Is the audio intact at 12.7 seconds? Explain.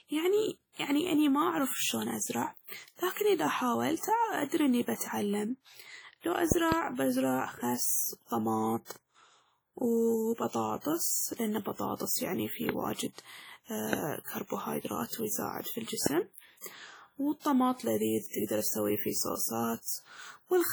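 No. From 12.69 to 12.71 s, just after "لأن البطاطس يعني فيه", a single loud pop sounds sharply over the speech, roughly 20 dB above it, while the speech carries on underneath. This is likely a sudden voltage step or pulse, from a plug, a switch, static or a driver glitch, shaped by the circuits that follow it.

The same moment also carries the heavy damage of WMA compression, which runs through the whole clip: ringing, washy speech with a hiss that breathes with the signal. The likely cause is this transform codec at a low bitrate, which fits about 32 kbps. Its quantisation noise smears across tens of milliseconds, and weak spectral lines drop out.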